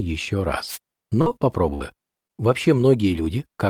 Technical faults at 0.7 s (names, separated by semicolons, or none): wireless microphone noise hit